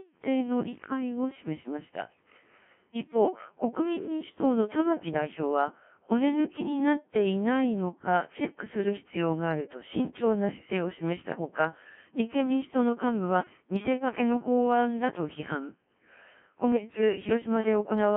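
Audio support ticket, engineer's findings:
Steady buzz at 345 Hz throughout, tracking signal level. Filter restarted on every block: state cleared per block, each starting with a small transient. The rate fits a 128-sample block. A fixed pitch rather than codec roughness.

Robotic, buzzy speech throughout, band-limited to about 150 Hz to 3.4 kHz. Codec 2 vocoder at 1.3 kbit/s, heavy damage: voice resynthesised from pitch, voicing and envelope, so the waveform is lost. Constant, unlike error bursts.

Pitch jumps, level swings and warbling bleeps at 10.48–10.70 s and 16.72–17.01 s. Bit errors on digital voice radio, around 7 percent of bits flipped, each corrupting a whole frame's parameters across a handful of frames. Brief bursts, not continuous.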